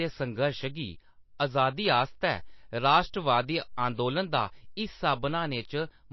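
MP3 compression damage runs through the whole of this speech clip, from start to finish: nothing is left above 5.8 kHz, and the remaining sound has a watery, swirling quality. The cause is likely an MP3 encoder starved of bits, which fits a very low bitrate of around 28 kbps. To cope, the encoder cuts the treble at a fixed frequency and discards weak frequency lines, which then flicker on and off from frame to frame.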